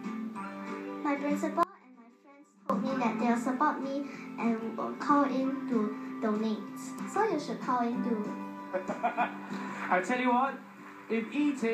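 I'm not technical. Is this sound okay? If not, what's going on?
No. From 1.63 to 2.70 s the sound abruptly drops to a faint trace for about a second: an audio dropout to a faint residue, likely a brief signal loss.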